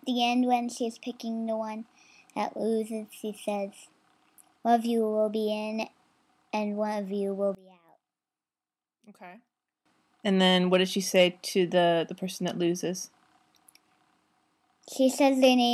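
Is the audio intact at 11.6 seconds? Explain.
Yes, the audio is intact at 11.6 seconds, with no dropout, glitch or other fault at that moment.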